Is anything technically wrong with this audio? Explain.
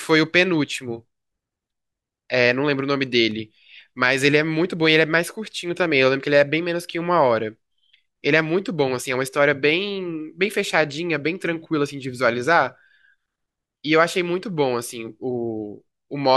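Yes. Between 3.06 and 4.06 s the speech carries CD scratch ticks: five short ticks, the longest about a millisecond. A blemish on the disc wipes out more data than error correction can restore, once per revolution, so the player interpolates or mutes those samples. The result is tiny clicks or gaps. Their evenly spaced rhythm, locked to the disc's rotation, distinguishes them from the random clicks of vinyl dust or from irregular digital dropouts.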